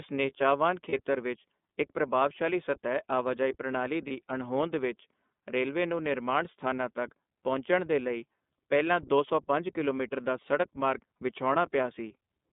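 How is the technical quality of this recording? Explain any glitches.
The recording is narrowband, plainly coded speech with two short dropouts.

iLBC codec, throughout: The speech passes through a low-rate VoIP codec that rebuilds each frame's excitation independently. The band is held to roughly 200 Hz to 3.6 kHz, and the voice sounds rough and synthetic. The quality fits iLBC's 13.33 kbps mode with 30 ms frames.

Lost iLBC frames, at 0.90 to 0.94 s and 4.07 to 4.12 s: Each gap fits one missing 30 ms frame. The decoder repeated the last pitch cycle blended with noise, so the voice briefly holds a buzzy vowel before normal speech resumes almost at once.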